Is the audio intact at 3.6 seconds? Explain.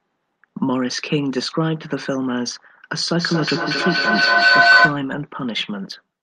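No. At 3.6 seconds the speech is inside a feedback howl that runs from 3.19 to 5.09 s. Sound from a loudspeaker is reaching a microphone on the same call and being sent back, gaining level on each pass, so the repeats build rather than decay. The loop settles on a tone around 1.5 kHz, repeating roughly every fifth of a second, and peaks at about 9 dB above the speech.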